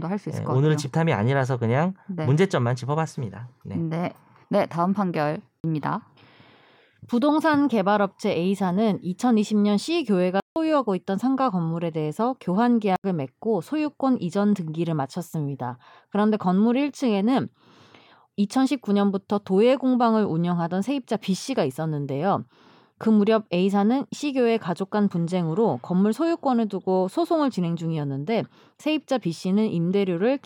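At 5.6 s the speech drops out for 40 ms, then again at 10.4 s for a longer 160 ms gap, and at 12.96 s for 80 ms. Each is a block of digital silence: the sound cuts out and back with no fade. The longest lands as a short hole. Blocks like these point to the output buffer not getting filled in time.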